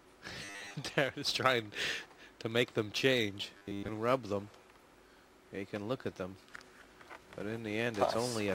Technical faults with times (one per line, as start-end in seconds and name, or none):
0.45-0.75 robotic sound from repeated short buffers
3.57-3.88 robotic sound from repeated short buffers